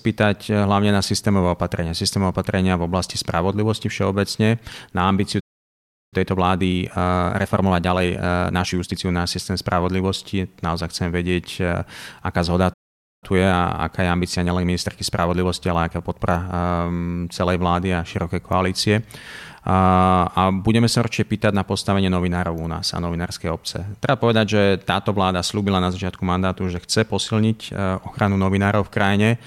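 At 5.40 s the speech halts for about 0.72 s, and at 12.73 s for about 0.49 s. Each is a playback stall, likely from the player running dry of data or its thread being blocked.

Right after each stall comes time-compressed catch-up. From 6.14 to 9.00 s the speech runs at 1.25 times normal speed, and from 13.24 to 16.24 s at 1.1 times. The player is cutting and cross-fading small pieces to clear its backlog, so the speech sounds hurried. Unlike a plain speed-up, the pitch stays normal.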